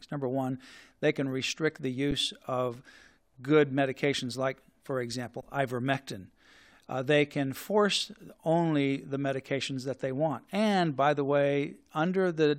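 At 2.11 s and again from 5.41 to 5.43 s, the speech drops out in an underrun with held sample. The buffer ran empty, the output froze, and the missing audio was skipped.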